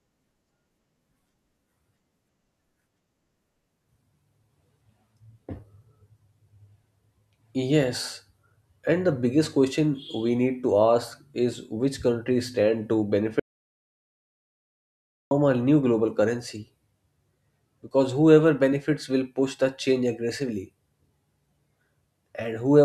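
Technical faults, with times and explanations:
13.40–15.31 s audio dropout to silence: the input was likely lost while recording carried on, leaving 1.9 s of dead silence, with no room tone, between "which countries stand to" and "a new global currency".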